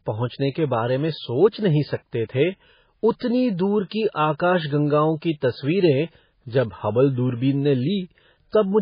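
Speech runs throughout with heavy MP3 compression damage, likely from a starved encoder. Nothing survives above 5 kHz. Weak frequency lines are zeroed and flicker between frames. That gives a watery, swirly texture. The damage fits a stream near 16 kbps.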